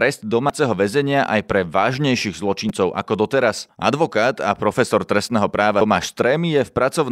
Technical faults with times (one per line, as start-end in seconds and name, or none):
0.49 damaged data in a compressed stream
2.67-2.71 damaged data in a compressed stream
5.77-5.81 damaged data in a compressed stream